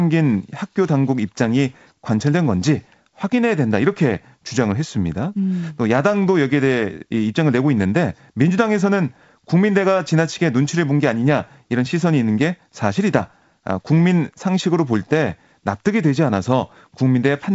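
No technical faults can be heard in this recording.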